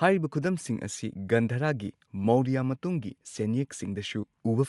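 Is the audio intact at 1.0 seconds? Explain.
No. At 1.0 s, as throughout the speech, there is plainly audible damage from what is likely Bluetooth LC3 compression, consistent with about 48 kbps in short 7.5 ms frames. The upper spectrum is thinned and refilled with noise, giving a breathy, grainy edge rather than the clean dull cutoff of simple band-limiting.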